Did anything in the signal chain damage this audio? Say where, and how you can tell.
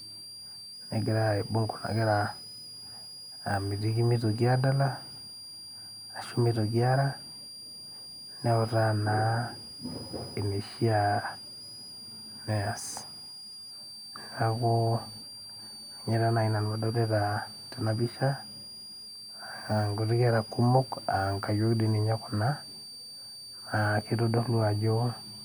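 Yes. A switching supply whistle sits in the analogue power or wiring stage for the whole speech clip, a high tone wandering between about 4.6 and 4.9 kHz, roughly 15 dB under the speech. A switching regulator cycling in audible burst mode couples in, drawn as a thin, wavering horizontal line near 5 kHz on a spectrogram.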